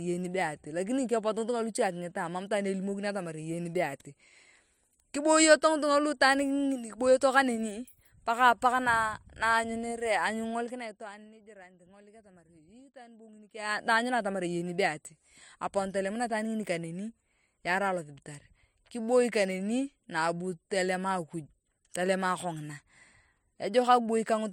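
A level change in this speech clip is applied in unsmoothed 1 dB steps from 10.48 to 11.34 s, dropping the level by roughly 20 dB at around twenty steps a second. Each jump clicks, so zipper noise ticks across the fade while the level falls.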